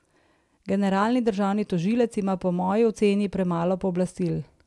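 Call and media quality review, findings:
Nothing to flag here; the speech comes through with no audible problems on the call or media path.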